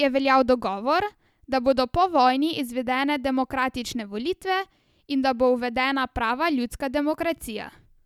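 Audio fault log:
No technical faults can be heard anywhere in this speech recording.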